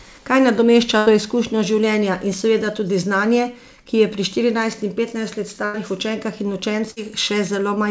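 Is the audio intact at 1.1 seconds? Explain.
No, not quite. Right around there, from 0.98 to 1.09 s, just before "to izkušnjo življenja in", there's a burst of packet loss. The receiver stretches the last sound into a fading buzz or hiss, then jumps ahead, dropping about 90 ms.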